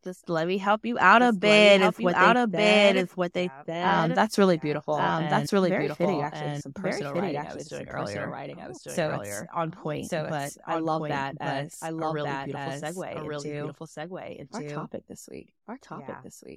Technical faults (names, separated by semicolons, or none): doubled audio track